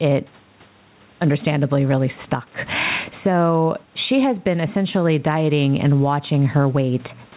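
Gain pumping throughout: the gain swings about 15 dB under loud speech, likely from excessive microphone gain driving a fast limiter.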